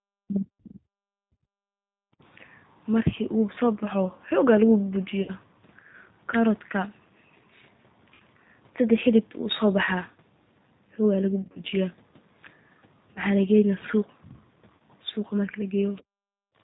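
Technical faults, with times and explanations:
throughout: G.729 codec. The speech is carried at 8 kbit/s and rebuilt from a vocal tract filter, a pitch predictor and a few pulses per frame. Nothing above 4 kHz survives, so the sound is band-limited, audibly rough and slightly synthetic.
0.00–0.86 s and 1.14–1.82 s: speech suppressed in double talk. The talker's level collapses by roughly 40 dB across about a second, then again for about 0.7 s. This is likely the echo canceller failing to separate the talker from loudspeaker echo and attenuating both.
2.10–2.22 s and 16.03–16.55 s: background gated by the echo canceller. The room sound is pulled down hard, by about 24 dB for roughly 0.1 s, then by about 40 dB for half a second. The canceller clamps the microphone while the loudspeaker plays and releases afterwards.
5.23–5.31 s, 8.14–8.22 s, 11.42–11.60 s, 13.14–13.20 s, 14.76–14.83 s: VoIP packet loss concealed by the speech codec. 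Gaps of 50, 60, 100, 20 and 40 ms are filled by extrapolating the last pitch and filter with falling gain. The result is a stretched, fading smear, and the weakness carries into the following frames. At 11.42 s the losses are scattered over 140 ms, with the longest run 40 ms.
15.95–16.03 s: other side's voice leaking through. A brief scrap of a second voice sits roughly 30 dB below the talker, likely residual echo that the canceller left in the microphone signal. It runs straight into the deep gating that follows.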